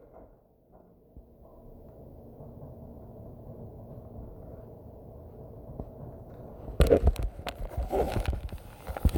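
Nothing technically wrong turns up anywhere in this recording of sounds, so there's no fault to pin down or explain.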